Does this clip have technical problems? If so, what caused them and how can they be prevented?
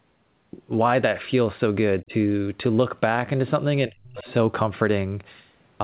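Yes. Speech suppressed in double talk: an echo canceller, likely confused by both sides talking at once, treated the near speech as echo and pulled it down sharply, briefly at 2.02 to 2.12 s and for nearly half a second at 3.85 to 4.27 s. Using headsets or a better-tuned echo canceller with proper double-talk detection keeps loudspeaker echo from triggering this.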